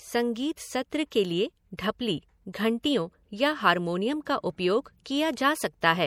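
Throughout, the audio carries the marks of MP3 compression, likely from an encoder with too few bits, which fits a rate around 64 kbps. It drops everything above 18.5 kHz and switches weak frequency lines on and off, so the speech sounds plainly watery and swirly.

At 1.77 s, just after "सत्र के लिए", there is pre-echo. The codec spread quantisation noise across its block, and the noise meant for a sharp attack leaked into the quiet just before it, giving a brief 15 ms hiss and a smeared onset.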